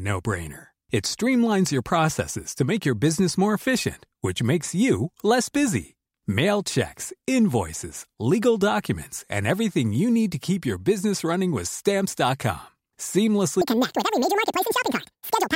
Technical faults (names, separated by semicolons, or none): audio read two samples at a time (double speed)